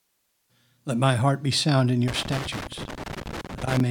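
A speech recording that breaks into loose connector crackle from 2.08 s to 3.80 s, starting right after "heart be sound in" and running almost to the end. The sound is chopped by an irregular burst of scratchy crackle, the signature of a worn or dirty contact in a cable or jack that repeatedly makes and breaks as it shifts, interrupting the signal and dumping any DC present on the line as clicks.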